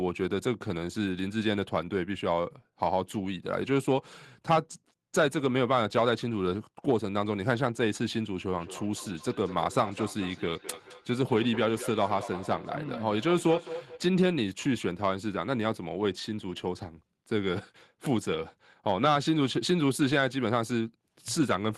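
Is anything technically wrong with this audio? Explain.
Yes. From 8.48 to 14.06 s the speech comes back as thin, ringing repeats roughly every fifth of a second, peaking about 13 dB below the direct sound. This is feedback echo between two devices: a second device in the room replays the call, and the first microphone picks it up again, beyond its own echo canceller's reach.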